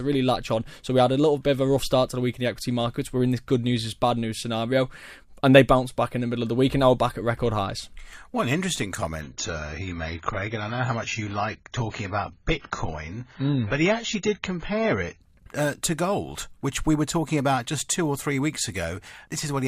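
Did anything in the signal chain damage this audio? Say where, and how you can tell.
Yes. The damage comes from the network and codec stage: the adaptive stream dropped to a lower bitrate from 9.21 s to 15.21 s, just before "uh to gold which". For those six seconds the speech loses everything above about 7 kHz and takes on a thin, smeared codec texture. The switch in and out is abrupt, with no gap. This fits a slowed connection forcing the player onto a low-bitrate rendition, around 16 kbit/s AAC against roughly 96 kbit/s either side.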